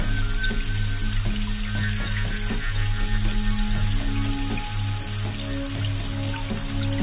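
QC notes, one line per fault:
Nothing to flag here, as the audio came through without any technical problems I could pick out.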